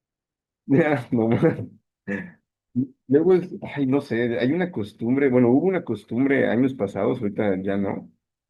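Nothing stood out as a technical problem when listening to this speech recording.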